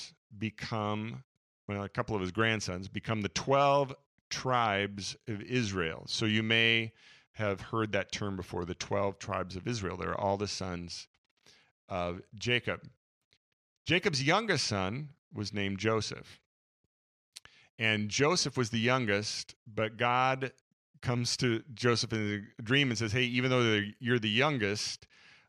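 No technical faults can be heard anywhere in the speech.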